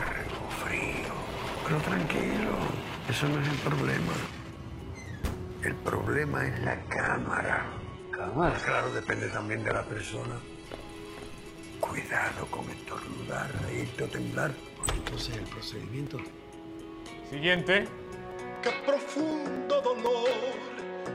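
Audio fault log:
0.06 to 21.06 s, periodic USB or driver dropouts: every 0.25 s a short slice of audio, roughly 4 ms, vanishes into silence, around a hundred times in all. Some recurring task is stalling the bus or driver on a fixed schedule, so evenly spaced ticks sound wherever signal is present.
6.65 to 10.65 s, adaptive stream at a lower bitrate: quality drops abruptly without any gap. Nothing remains above 11.4 kHz, the top end turns thin and synthetic, and codec artefacts thicken, which points to a switch from a mid-rate AAC stream to a very low-rate HE-AAC rendition.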